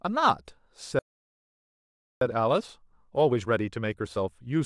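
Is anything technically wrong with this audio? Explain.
Yes. From 0.99 s to 2.21 s the speech cuts out mid-flow and leaves about 1.22 s of silence, a playback stall, likely the player running short of data or its thread being blocked. From 2.21 s to the end the speech sounds hurried but keeps its normal pitch. This is time-compressed catch-up: the player works through its backlog at 1.25 times normal speed by cutting out short pieces and cross-fading across the gaps.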